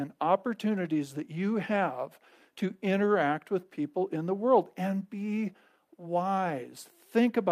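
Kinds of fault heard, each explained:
No technical faults can be heard in this speech recording. There is nothing in the signal that calls for a fault to be listed.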